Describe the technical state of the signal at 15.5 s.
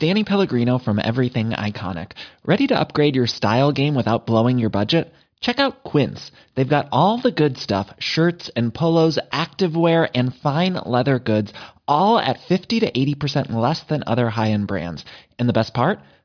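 At 15.5 s the speech signal is intact, with no audible technical fault at that moment.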